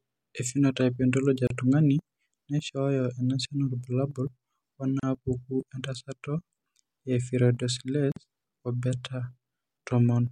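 Speech, interrupted three times by a gap at a join of encoded pieces: brief silences open at 1.47 s (about 32 ms), 5.00 s (about 34 ms) and 8.12 s (about 46 ms), each with smeared edges, after which the speech resumes exactly where it stopped. The pattern fits separately encoded segments joined without trimming, so each segment's encoder start-up delay and padded final frame remain as dead air at the seams.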